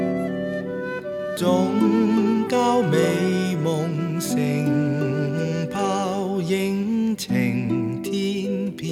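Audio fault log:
No faults found in this clip.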